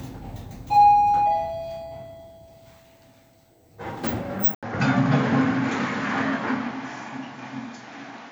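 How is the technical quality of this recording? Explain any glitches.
The recording has one clear fault: a device change partway through.

At 4.55 s, after an 80 ms gap, the sounds turn dull and band-limited, with nothing above 7.2 kHz and a new noise floor roughly 30 dB down. Loudness holds roughly steady. The likely cause is the input switching to a poorer device with a narrower band, and that device stays in use to the end.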